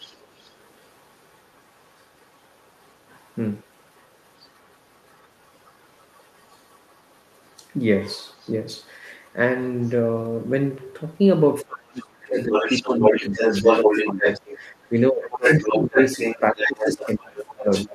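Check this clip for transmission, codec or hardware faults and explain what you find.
Two echo-related faults are present, both pointing to the far end's loudspeaker audio reaching the microphone.

Other side's voice leaking through: a second, very faint voice sits far beneath the talker from 0.00 to 2.95 s, 3.62 to 7.63 s and 8.25 to 8.89 s, with brief scraps at 9.26 s and 9.8 to 9.95 s. From 12.23 s to the end it returns at roughly the talker's own level. The likely cause is an echo canceller leaving residual loudspeaker sound in the microphone signal.

Speech suppressed in double talk: from 11.62 s to the end the talker's voice sinks, dropping by as much as about 30 dB while the other voice is strongly present. Both sides were likely talking at once, and the canceller, unable to tell its own talker from the echo, pulled both down.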